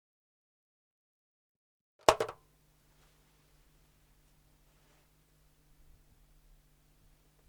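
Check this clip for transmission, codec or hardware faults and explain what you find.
One fault is present: an audio dropout to a faint residue. From the start until 2.09 s the sound is reduced to a faint trace, roughly 40 dB below normal, then returns abruptly. The wanted signal was likely lost upstream while the path after the break stayed live.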